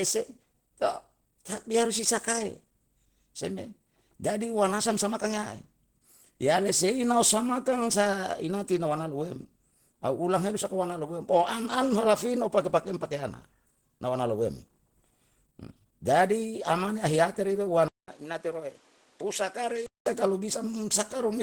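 The speech was likely passed through Opus compression at a low rate, fitting about 16 kbps in its hybrid speech mode. Audible throughout, the band still reaches about 20.1 kHz, but the voice sounds plainly rough, grainy and somewhat hoarse.

Just after "ahiyate rido", at 17.88 s, the recording likely switched input to a poorer device. A 200 ms silence marks the switch. Until 20.06 s, nothing passes above 11.4 kHz, the voice is dull and roughly 5 dB quieter, and a new noise floor sits around 30 dB below it.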